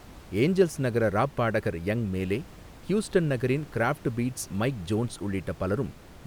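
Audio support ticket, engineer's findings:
No faults found in the speech clip. Room noise is audible underneath, sitting about 22 dB below the speech, and is part of the recording rather than the system.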